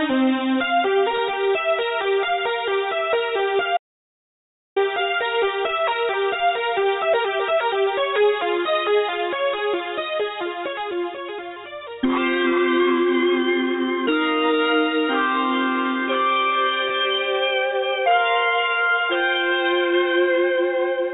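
Audio passed through a narrowband call path, with nothing above 4 kHz, which fits G.711 mu-law at 64 kbps, and it carries two faults. Short concealed packet loss appears at 1.16–1.20 s, 11.54–11.58 s and 16.88–16.92 s. Each time, about 20 ms went missing and the receiver covered it by extending the preceding sound, so you hear a brief smear or wobble rather than a gap. An audio dropout to silence runs from 3.77 to 4.76 s: roughly a second of silence with no room tone, most likely from a lost input or failed link. Unlike the concealed losses, nothing fills the hole, and the sound simply stops and resumes.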